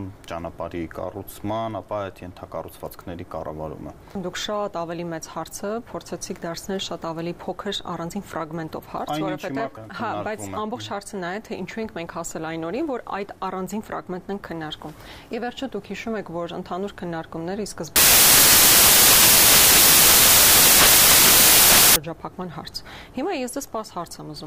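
From 17.96 to 21.96 s the sound collapses into loud, harsh broadband noise for four seconds. These are samples built from the wrong bytes: misaligned or swapped bytes let the rapidly changing low bits dominate each value.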